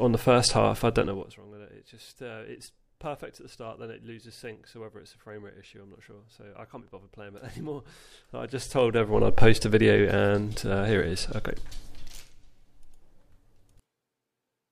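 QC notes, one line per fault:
1.00–1.39 s, 8.03–9.43 s, 11.96–12.38 s, zipper noise: a fast ticking rides on the sound as the level falls about 20 dB, rises about 20 dB, then falls about 15 dB. The gain jumps in unsmoothed steps of about 1 dB or less, roughly forty a second, each leaving a click.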